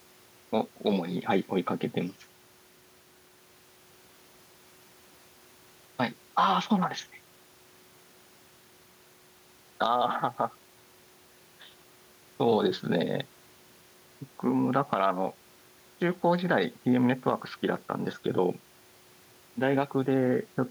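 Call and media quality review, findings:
No faults found in this call and media quality review.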